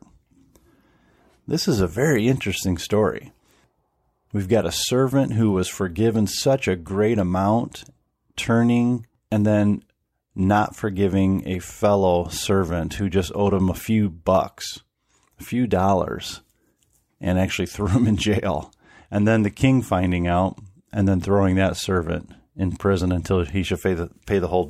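No technical faults are audible anywhere in this speech recording.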